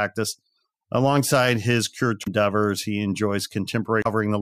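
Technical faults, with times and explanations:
2.21–2.28 s and 4.01–4.07 s: damaged data in a compressed stream. Corrupted frames make the decoder lose sync and search for the next frame header, giving brief disruptions heard as a chirp, squawk, click or short hole.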